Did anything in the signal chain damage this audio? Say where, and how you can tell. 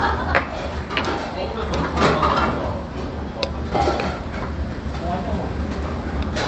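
No, nothing in the chain damaged this sound: its top end stops at about 8 kHz, consistent with an Opus-coded WebRTC call path running at roughly 40 kbps.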